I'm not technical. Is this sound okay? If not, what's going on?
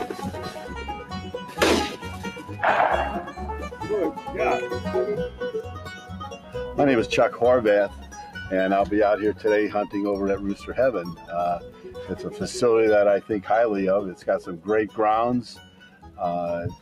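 No. A noise suppressor applied to music or sounds was left on for the whole clip. It is built for voices, so it mistakes steady sound and fading tails for noise. It keeps turning them down, and the level keeps rising and falling.

There are also eight moments of sound cut by the noise suppressor: 0.55 to 1.57 s, 1.97 to 2.52 s, 5.96 to 6.55 s, 7.95 to 8.14 s, 11.14 to 11.3 s, 11.62 to 11.89 s, 14.15 to 14.98 s and 15.55 to 16.18 s. Here held or fading sound sinks, while sudden sounds get through.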